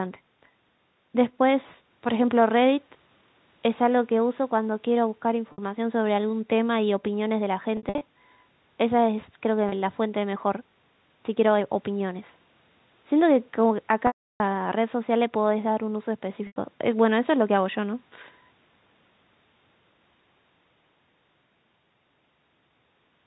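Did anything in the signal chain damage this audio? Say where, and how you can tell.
Yes. At the network stage, speech drops out with packet loss with pitch repetition at 5.52 s (60 ms), 7.77 to 8.01 s (150 ms lost in scattered runs of up to 60 ms), 9.69 s (30 ms), 14.07 to 14.40 s (330 ms) and 16.47 s (90 ms). The receiver fills each gap by looping the last pitch period. The short gaps come out as a brief, buzzy held tone. The 330 ms gap outlasts the roughly 50 ms fade, so it decays to silence before speech cross-fades back. The gap lengths fit 30 ms packets.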